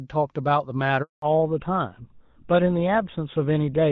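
At 1.02 s a handover gap cuts the speech off as the call is passed from one network link to another and no speech frames get through during the switch. The sound fades out within a few tens of milliseconds and stays silent for 200 ms, until 1.22 s, and whatever was said in that stretch is gone. On a waveform this is a flat line after a short taper. On a spectrogram it is a clean vertical blank band across all frequencies.

From 1.22 s to the end, the call falls back to narrowband. Before the gap, the light wideband coding sounds like HD Voice at around 12.65 kbit/s, with energy reaching up toward 7 kHz. Once the new link starts, nothing above 4 kHz remains. This fits an older narrowband codec such as GSM full rate. The speech turns duller and rougher, with sibilants losing their crispness. A spectrogram shows the upper content abruptly sheared off at 4 kHz, a hard horizontal ceiling that lasts to the end.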